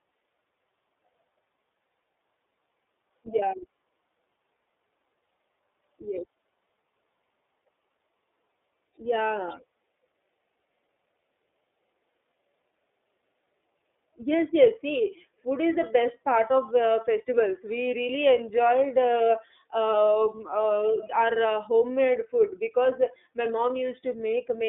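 Speech, carried through the iLBC codec from start to finish. The band is narrow. Little passes below 300 Hz or above 3.6 kHz, so the sound is thin and muffled. The coding damage is plainly audible. Each frame's excitation is coded on its own, which leaves the voice rough and slightly synthetic. The texture fits the 13.33 kbps mode with 30 ms frames.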